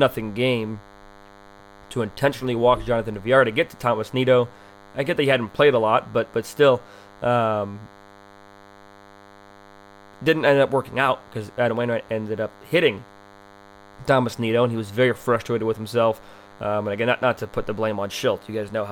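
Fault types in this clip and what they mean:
DECT cordless phone buzz: a thin, steady buzz with many harmonics runs under the speech throughout, well below it, from a nearby DECT unit's radio bursts repeating at 100 Hz and being rectified.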